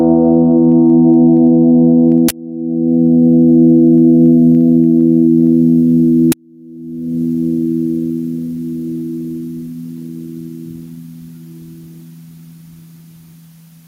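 The music pumps from start to finish. The level swing is roughly 25 dB. This is gain pumping. The likely cause is input gain set far too high, with a fast limiter or compressor clamping down on every peak. Loud and soft passages end up squeezed close together. The whole mix sounds flattened and breathing.

At 2.29 s a sudden, loud burst of digital noise cuts in. It lasts about 20 ms, to 2.31 s. This is an uninitialised buffer. A block of audio was played before anything was written into it, so stale memory came out as samples. A second, shorter burst hits at 6.32 s, about 10 ms long. The two lengths fit blocks of roughly 20 ms and 10 ms. Both are harsh, sudden cracks of noise.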